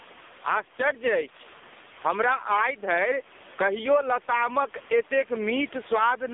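From start to finish the background breathes: between phrases the faint room noise, sitting about 31 dB below the speech, swells up, then drops away each time the talker gets loud, with a level swing of around 15 dB. Loud and quiet syllables land at nearly the same level, so the delivery sounds flattened. This is gain pumping, likely from input gain set far too high with a fast limiter or compressor clamping down on every peak.

Across the whole clip the speech is also thin, buzzy and synthetic, with a watery, swirling quality on the room noise behind it. Everything sits in a narrow band from roughly 250 Hz to 3.6 kHz, with nothing above 3.6 kHz. These are the marks of the AMR narrowband mobile codec (AMR-NB), which rebuilds speech from a vocal-tract model excited by a few pulses per short subframe. The damage is heavy, which points to one of the lowest-bitrate modes, around 5 kbps.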